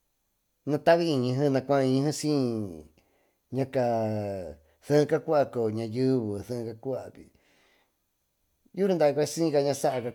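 Nothing here trips the ear at any point; the speech just runs along with no dropouts, glitches or other technical faults to point to.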